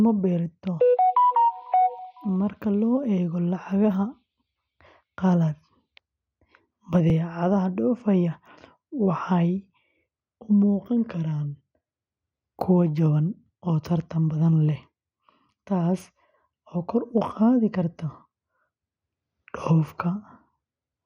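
Throughout, the speech sounds dull and gurgly, with nothing above 15.9 kHz and granular, flickering upper bands, likely MP2 compression at a low rate around 64 kbps, unlike MP3's swirly pre-echo. At 7.10 s a tiny jump forward, with no gap of silence, likely marks a dropped buffer (overrun): a few milliseconds of audio are skipped, not muted.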